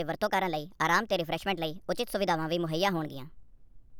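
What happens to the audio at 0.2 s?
At 0.2 s, as throughout, the speech has a wrong sample rate. It runs 1.38 times too fast, about 5.6 semitones high, fitting 32 kHz audio played at 44.1 kHz.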